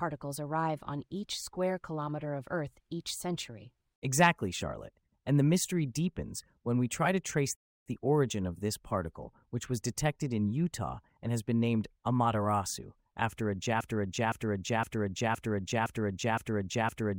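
At 7.55 s the speech drops to silence for about 0.31 s and resumes exactly where it stopped: a rebuffering stall, where playback waited for more data.

From 13.81 s to the end, one 0.51 s fragment repeats seven times back to back: a broken-record loop, likely a stalled stream resending its last piece.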